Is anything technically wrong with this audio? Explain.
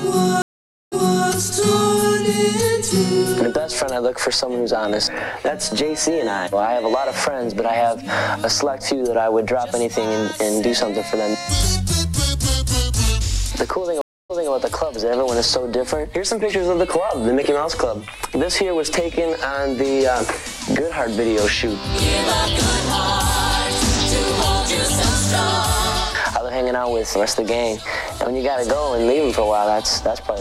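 Yes. Stream reconnects at 0.42 to 1.29 s and 14.01 to 14.50 s: the connection dropped, went silent (498 ms, then 282 ms), and a fresh decoder restarted with the resent burst. The sound fades back in, repeating 372 ms and 209 ms of audio.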